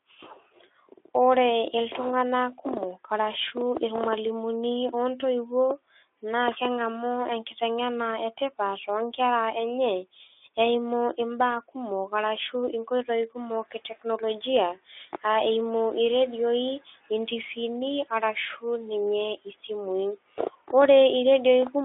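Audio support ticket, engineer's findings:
Speech cut by the noise suppressor at 7.44–7.62 s, right after "naa keng'amu". Component: noise suppressor. Quiet speech was classed as noise and pulled down with the background, by up to about 11 dB. Roughly a tenth of a second sounds swallowed. Again at 13.71–14.23 s, with a drop of up to about 12 dB and about 150 ms affected in total. That one follows the noise rise.

Noise suppressor catching up at 13.37–13.56 s. Room noise jumps by about 24 dB near 13.5 s. The suppressor's noise estimate lags, so the background leaks through at first. It then sinks by about 10 dB as the estimate adapts over 190 ms.

Path: Speex, telephone band of 300 Hz to 3.5 kHz. The sound is consistent with a bitrate around 15 kbps. Codec damage is light.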